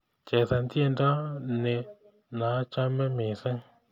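No technical fault can be heard anywhere in the speech; the signal stays continuous and steady throughout.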